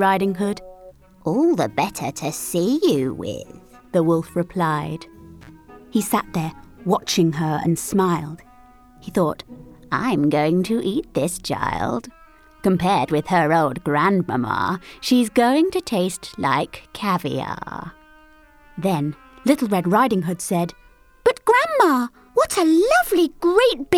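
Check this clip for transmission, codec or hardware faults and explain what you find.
One hardware fault is present, an intermittent contact, from 5.41 to 5.49 s. A loose plug or cable briefly lost connection, so the sound drops out for about 42 ms with crackle at either edge. The waveform shows a near-flat gap bracketed by sharp spikes, and the spectrogram shows thin vertical broadband streaks around a short dark band.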